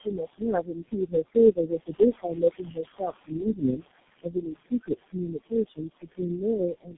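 A short speech recording carries noise suppressor artifacts throughout: the suppressor pulls steady background down by about 21 dB frame by frame, so the room noise, sitting about 11 dB under the speech, dips between phrases and swells back beneath them. Tandem speech coding is also present for the whole clip. The bandwidth stops near 3.8 kHz and the voice is rough, muffled and warbly, which points to four successive low-rate speech codecs, each re-encoding the previous one's damage and ending in a G.723.1-type coder. Speech cut by the noise suppressor occurs in three stretches, from 0.00 to 1.36 s, from 1.52 to 3.85 s and from 4.23 to 6.97 s. In these, parts of the speech are pushed down by about 21 to 22 dB along with the noise, roughly one, one and a half and two seconds in total respectively, so they sound swallowed.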